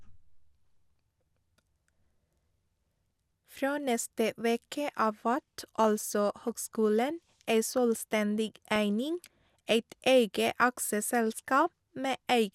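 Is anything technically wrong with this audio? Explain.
Yes, there's a brief burst of DAB burbling from 8.76 to 8.78 s, just before "eining eit". A few residual bit errors, around a tenth of a percent, slipped past error correction and corrupted samples in single sub-bands across what sounds like a handful of MP2 frames, giving a few quick watery blips.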